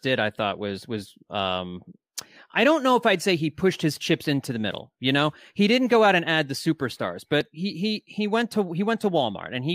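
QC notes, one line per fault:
2.53–7.41 s: clock drift buffer slips. Regular clicks every 2.44 s starting just before "he he he went", likely from clocks about 500 ppm apart, each slip roughly 70 samples.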